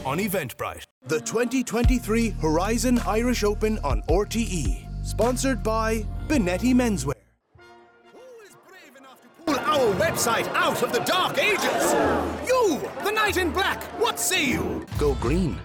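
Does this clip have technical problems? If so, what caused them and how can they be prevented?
Yes. From 7.13 to 9.48 s the audio collapses by about 25 dB into a faint residue. This is likely one channel inverted: with one stereo side's polarity reversed, everything shared between left and right cancels on mono summing. To prevent it, check polarity on every cable, plugin and channel setting, and monitor in mono before release.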